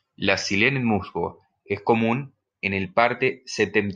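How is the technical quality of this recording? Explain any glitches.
No glitches can be heard in the recording; the speech signal stays continuous and intact throughout.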